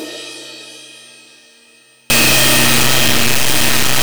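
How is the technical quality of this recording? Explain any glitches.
From 2.1 s to the end, the sound breaks into very loud, harsh distortion, and quiet moments blare as loudly as everything else. The likely cause is signed and unsigned mixed up in the 8-bit samples, so every zero crossing jumps across the full range. Unlike ordinary clipping, which only flattens loud peaks, this corrupts quiet passages too.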